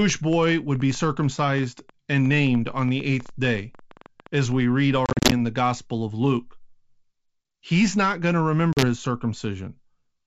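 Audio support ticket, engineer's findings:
Train of clicks, 0.02 to 4.53 s. Popping over the sound and in pauses. Irregular spacing, about 8.4 per second, roughly forty in all. Peaks about 5 dB above the signal. Likely interference or a failing interface injecting repeated pulses.

Packet loss on an ADPCM call, 5.06 to 5.32 s, ending just before "in the". Hard-edged silent gaps, 150 ms lost across 260 ms, longest run 40 ms. That fits around fifteen 10 ms packets. The decoder's predictor and step size drift from the sender's, so the sound returns slightly distorted.

Second loss at 8.73 to 8.85 s, just after "not going to". 40 ms missing, consistent with about four packets. Same ADPCM state mismatch on resume. G.722 at 64 kbit/s carries the surrounding audio.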